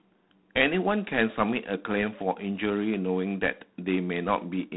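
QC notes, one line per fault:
Throughout: G.726 ADPCM. A harsh, rasping hiss rides on the speech and swells and fades with its level, and nothing passes above about 3.9 kHz. The coarse difference-from-prediction coding fits the 24 kbit/s mode, whose few bits per sample leave plainly audible quantisation noise.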